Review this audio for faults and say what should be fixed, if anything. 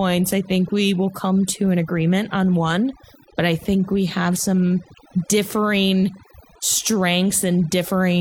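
Overdone noise removal runs through the whole speech clip. The reduction is set too aggressively, so frequency bands near the noise estimate are pulled down or gated off along with quiet speech detail. Pauses drop to near silence with twinkling specks. To prevent it, reduce the strength and check the result on pauses and soft consonants before committing.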